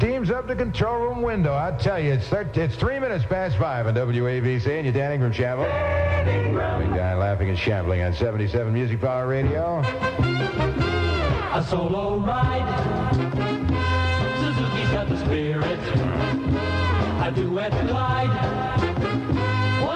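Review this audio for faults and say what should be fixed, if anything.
No faults found; nothing needs fixing.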